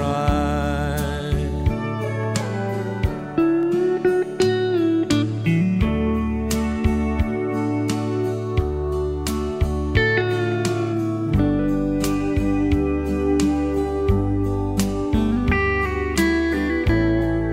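Dropped samples, likely, at 2.23, 3.63, 5.83, 10.97 and 15.38 s: each time a tiny fraction of a millisecond goes missing, so the waveform leaps straight to a later value. Nothing audible is lost, but each jump gives a single sharp click.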